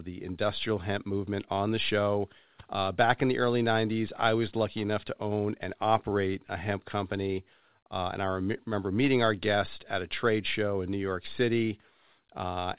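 No technical faults can be heard in the speech, which has the narrowband sound of a telephone call path with nothing above 4 kHz, consistent with G.711 mu-law coding at 64 kbps.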